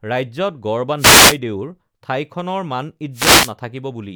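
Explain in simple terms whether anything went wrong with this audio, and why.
Two bursts of static, at 0.97 to 1.38 s and 3.13 to 3.53 s, are wireless microphone noise hits: the radio signal briefly faded, so hiss swished over the speech rather than cutting to silence.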